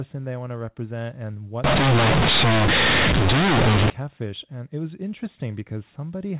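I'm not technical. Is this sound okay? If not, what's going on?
No. From 1.64 to 3.90 seconds, right after "want to represent and", the speech turns into a very loud, harsh buzz with heavy noise filling the pauses. This is companded audio read as linear: the telephone-style A-law data was played back as plain 8-bit samples without being decoded, so quiet and loud sounds come out equally huge and distorted.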